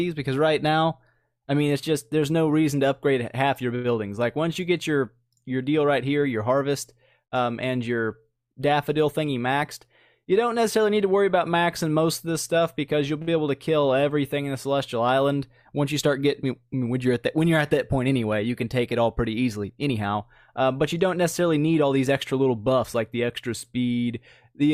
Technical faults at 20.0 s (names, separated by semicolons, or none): jitter buffer speed-up